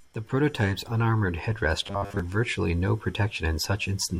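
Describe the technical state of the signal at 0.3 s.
At 0.3 s the signal is intact, with no dropout, distortion, glitch or other technical fault audible in the speech at that moment.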